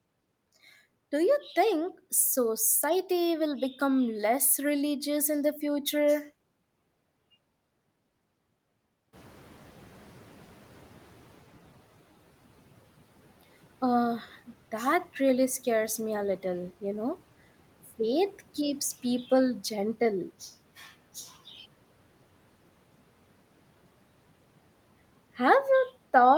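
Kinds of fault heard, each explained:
Noise suppressor catching up: when the room noise jumps by about 14 dB around 9 s, the suppressor's estimate lags, so the noise comes through with less reduction from 9.13 s, then sinks by about 10 dB over 2.69 s; unlike gate pumping, it settles once.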